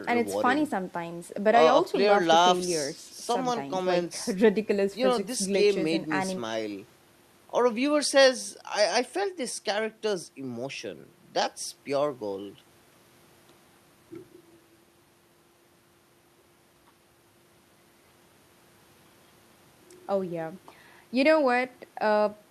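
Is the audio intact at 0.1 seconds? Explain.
Yes, at 0.1 seconds the speech plays through intact with no fault at that moment.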